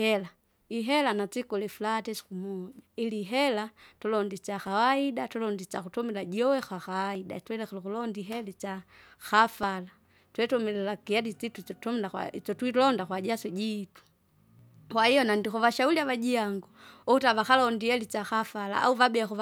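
The speech skips briefly at 7.15 s, between "tulonde isyakutumila juwe" and "twilekire ukulonda ihera itsya". It skips again at 9.63 s, and at 14.59 s, between "kwa isyotwilonda kwajaso ijitu" and "kwahiyo nandikuvashauri avajiangu". Each skip drops a tiny slice, around 20 ms. The two sides butt together with no gap. The likely cause is audio missing between chunks, with sound lost each time one 2.5 s chunk closes and the next opens.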